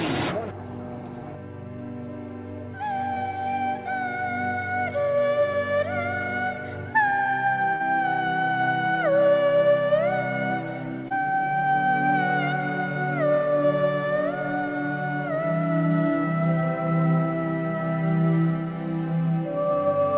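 Short concealed packet loss occurs three times: at 3.14 to 3.18 s, 7.76 to 7.82 s and 11.08 to 11.12 s. Roughly 20, 40 and 20 ms of audio arrived too late, so the receiver extended the preceding sound and blended back, leaving brief smears or wobbles within the 4 kHz-limited call band.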